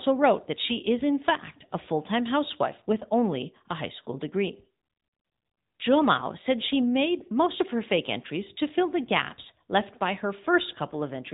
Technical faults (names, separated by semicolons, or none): AMR narrowband mobile codec